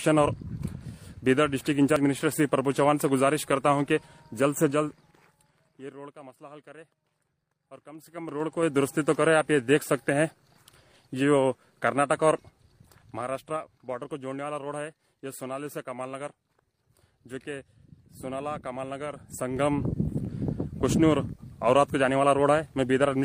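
A ticking, zipper-like chatter rides on the sound whenever the level moves: 4.61 to 6.19 s (down about 25 dB), 7.89 to 8.79 s (back up), 12.33 to 13.82 s (down about 15 dB) and 18.99 to 19.97 s (up again). This zipper noise comes from gain changing in unsmoothed 3 dB jumps, each jump leaving a small click.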